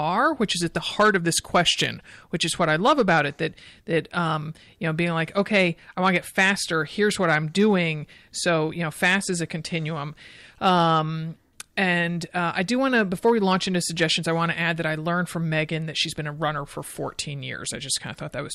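Throughout the speech, hard clipping flattens the loudest peaks: the signal runs about 5 dB beyond what a stage can pass, so only a small fraction of samples are cut square. That gives brief crackle on peaks rather than the constant rounded fuzz of soft saturation.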